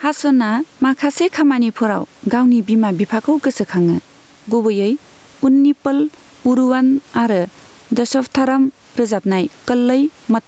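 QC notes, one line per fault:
Throughout: gain pumping. The room noise sits about 41 dB below the speech. The gain swings by around 10 dB. The likely cause is input gain set far too high, with a fast limiter pulling it down on every peak. Loud and soft passages end up pressed close together, so the speech sounds squashed.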